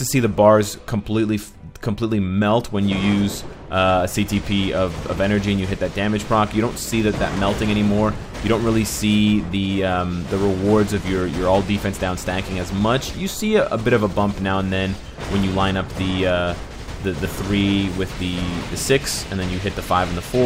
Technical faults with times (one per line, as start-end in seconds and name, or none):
none